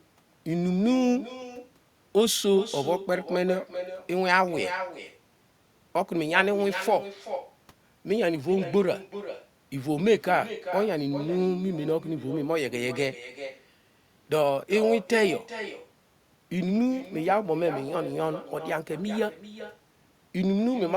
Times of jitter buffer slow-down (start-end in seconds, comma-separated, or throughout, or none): none